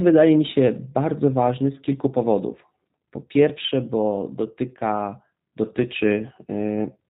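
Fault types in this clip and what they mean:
G.729 codec: speech squeezed to about 8 kbit/s and rebuilt from a vocal tract model with sparse pulses, leaving nothing above 4 kHz and a plainly rough, synthetic edge throughout.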